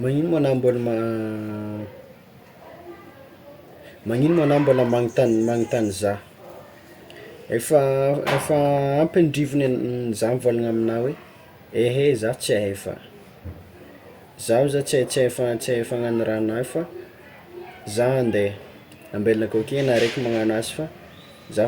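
No technical faults can be heard anywhere in the recording.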